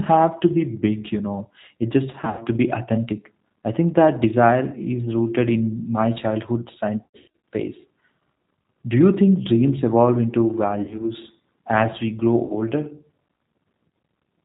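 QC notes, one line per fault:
Throughout: G.729 codec damage. The speech passes through a G.729A coder at 8 kbit/s, which models each 10 ms frame with a vocal tract filter, a pitch predictor and a handful of pulses, then rebuilds it from those parameters. Nothing above 4 kHz survives, so the speech is band-limited and dull, and the coarse pulse excitation gives it a plainly audible rough, slightly synthetic edge.
2.11 to 2.42 s: VoIP packet loss concealed by the speech codec. About 160 ms of packets went missing, scattered over 280 ms with the longest gap 100 ms. The decoder filled each gap by repeating its last pitch and filter with falling gain, so the sound smears into a buzzy, fading tone, and because every frame leans on the previous one, the speech stays weak and distorted briefly after packets resume.
7.04 to 7.30 s: VoIP packet loss concealed by the speech codec, just after "my childhood". 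This is the heaviest loss, with about 300 ms missing across 400 ms and runs up to 100 ms. The decoder again extrapolated from stale pitch and filter state while ramping down, giving a stretched buzz that sinks toward coloured noise, with a sluggish, weak recovery as the predictor rebuilds its state.
10.83 to 11.06 s: VoIP packet loss concealed by the speech codec, just after "think dreams evolve into". About 80 ms was lost over 160 ms, in gaps no longer than 40 ms. The short concealed stretches come out as brief buzzy smears, and the speech wavers for a moment afterward while the decoder's prediction catches up.
12.46 to 12.55 s: VoIP packet loss concealed by the speech codec, just after "as we grow". About 40 ms of packets was lost and papered over by repeating the last frame's pitch and filter, giving a short tonal blur and a weakened onset as the decoder recovers.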